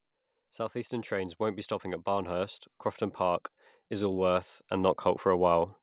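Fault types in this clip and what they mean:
Automatic gain rising: the gain control decides the input is too quiet and turns itself up gradually, so the speech and the background swell together, about 6 dB from 0.72 to 2.64 s, then about 7 dB from 3.17 to 5.76 s, heard through narrowband call audio.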